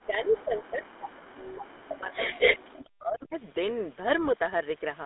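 What you've got here is a speech clip squeezed through the GSM full-rate codec the whole way. The sound sits in a narrow 250 Hz to 3.6 kHz line band with nothing above 3.8 kHz, and it has that plainly audible buzzy, gravelly roughness you get from pulse-driven excitation at a rate that fits 13 kbps. The microphone processing's low cut is just normal call behaviour. From 0.0 to 2.59 s the speech keeps dipping and dropping out, by roughly 40 dB at its deepest and for about two seconds in total. That's likely speech suppressed in double talk, with the canceller turning the talker down because it couldn't tell them apart from the far-end echo. There's also echo leak twice. From 0.35 to 0.42 s a faint copy arrives 370 ms late, about 25 dB under the speech, likely the canceller missing part of a loudspeaker pickup. Then from 2.4 to 2.58 s a copy delayed 210 ms comes back about 5 dB louder than the speech itself, which is likely the same leak getting through far more strongly.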